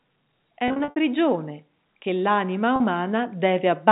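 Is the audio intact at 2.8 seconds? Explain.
No. Packet loss with pitch repetition hits from 2.76 to 2.80 s. About 40 ms went missing, which points to two lost packets. The receiver repeated the last pitch period, so the gap sounds like a held, buzzy tone. Automatic gain rising is also underway from 0.43 s to the end. The gain climbs by about 7 dB, so voice and background swell together.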